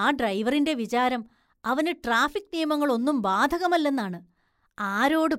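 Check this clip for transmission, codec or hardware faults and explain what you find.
Nothing to flag here: the speech comes across steady and intact, with no transmission, codec or hardware trouble to be heard anywhere in it.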